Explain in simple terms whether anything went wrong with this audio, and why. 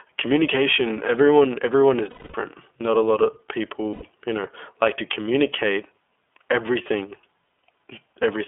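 Yes. The whole recording went through the iLBC codec, a phone-line voice coder that cuts everything above about 3.4 kHz, so the speech sounds narrow, slightly rough and synthetic. Lost iLBC frames occur at 2.1 to 2.37 s, after "communication everyone everyone is", and at 3.93 to 4.03 s, after "not a lot of". Each gap is filled with a held, buzzy vowel rather than silence, and clear speech resumes immediately afterward.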